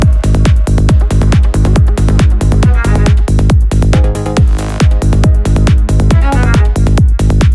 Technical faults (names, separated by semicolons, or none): none